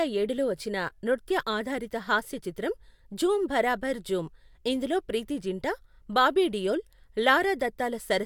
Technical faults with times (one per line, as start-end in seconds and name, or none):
none